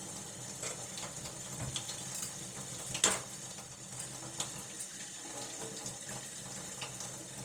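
From start to finish, the audio was likely passed through Opus compression at a low rate, consistent with about 24 kbps in its music mode at full bandwidth. Short of bits, the encoder fills bands with noise or folded content, so tones sound grainy, rough and noisy.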